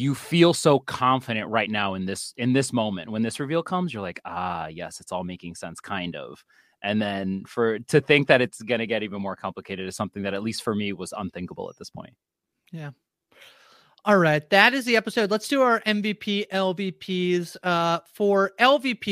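Nothing in this bit of speech stands out as a technical fault; it just runs along without any audible trouble.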